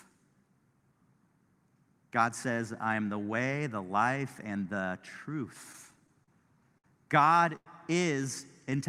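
From 5.72 to 6.85 s there are repeated stalls (stutter): seven short gaps, the longest 59 ms, about 136 ms in all. Packets arrived more slowly than playback, so the jitter buffer kept running dry and the last sound was stretched across each gap. Nothing is lost, but the speech drags and hiccups.

At 7.56 to 7.67 s a call audio freeze holds the sound for 101 ms, ending in roughly 40 ms of silence before speech resumes where it stopped. The likely cause is packets held up in transit, emptying the jitter buffer and adding a 101 ms delay.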